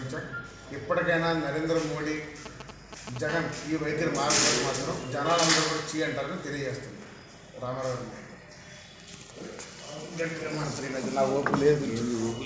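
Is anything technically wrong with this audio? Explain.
Yes, two kinds of phone interference break into the audio, one right after the other, heard through a band-limited call path whose top end stops at 8 kHz, which fits a wideband codec such as G.722.

From 2.46 to 3.18 s there are GSM signalling bursts. A nearby 2G handset is exchanging short control transmissions with the network, and the audio circuitry rectifies each radio pulse. The result is a galloping dit-dit-dit of brief 217 Hz buzzes, fairly loud at roughly 10 dB below the wanted signal. On a waveform it shows as clustered spiky packets. A spectrogram shows short, separated vertical blocks of evenly spaced harmonic lines.

From 3.29 to 4.55 s a continuous GSM phone buzz follows, consistent with the handset now carrying a call. It transmits 217 bursts per second without gaps, so the rectified pulses form a hard, raspy 217 Hz tone rich in harmonics that has no relation to the programme. 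It sits about 18 dB below the signal. The spectrogram shows an unbroken comb of horizontal lines at multiples of 217 Hz reaching the 8 kHz ceiling. The waveform carries a fine, regular pulse-like ripple.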